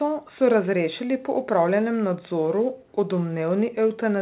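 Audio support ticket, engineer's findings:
No faults found in the speech. Nothing above 4 kHz, which fits a narrowband call codec such as G.711 mu-law on the call path.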